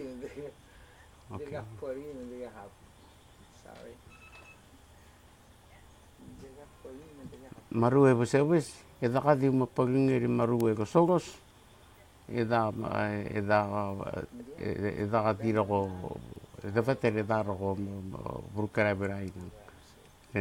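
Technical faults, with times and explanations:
10.61 s and 16.36 s, bit error spike. Each is one corrupted sample, where a flipped bit jumps the value by a power of two and snaps straight back. That gives a single sharp, broadband tick unrelated to the sound, about -12 dBFS at the first and about -36 dBFS at the second.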